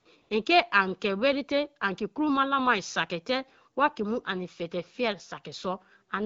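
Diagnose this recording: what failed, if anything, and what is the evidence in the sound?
AMR comfort noise appears twice in this speech clip's call processing: the background gives way to a smooth, even hiss from 0 to 0.05 s, and again from 0.21 to 0.29 s for about 80 ms. The sender flagged those stretches as silent and dropped speech frames. The receiver substituted synthetic noise built from a rough level-and-spectrum estimate, so the real ambience briefly switches out.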